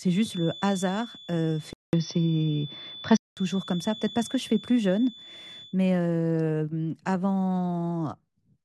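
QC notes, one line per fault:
0.00–5.78 s, feedback whistle: The loudspeaker-to-microphone loop is likely sitting just at the edge of feedback, so one frequency keeps recirculating without building into a howl. A thin, steady tone at 3.5 kHz sits behind the speech, around 20 dB below it, swelling and fading slowly in level, and then stops at 5.78 s.
1.73–3.37 s, input switched to a poorer device: The recording likely changed over mid-take to a lesser microphone or a headset's call profile, then returned. A 200 ms silence marks the switch. The speech then turns dull and boxy, with nothing above 6 kHz, shifts roughly 5 dB in level, and carries a new background noise floor around 45 dB down, before the fuller sound comes back at 3.37 s.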